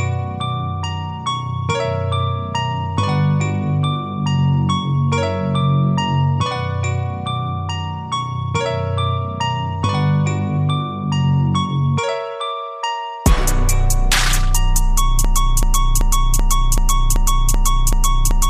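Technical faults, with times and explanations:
15.25–18.50 s, broken-record loop: the player or stream likely stalled and kept resending the last 0.38 s fragment it held, so that identical piece repeats back to back eight times until the clip ends, and whatever audio belonged there never plays.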